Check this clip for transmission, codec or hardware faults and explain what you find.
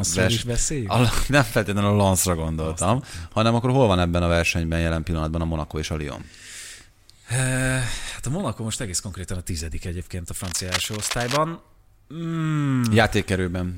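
One hardware fault shows up. From 10.44 to 11.37 s, just after "a tizedik egyébként a", there's cable scratch noise: dense, ragged scratching sitting fairly loud under the speech, likely from a worn cable or connector being moved.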